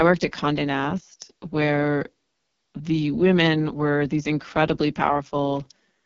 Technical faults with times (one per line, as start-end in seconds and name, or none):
0.00-6.05 AMR wideband (HD Voice) codec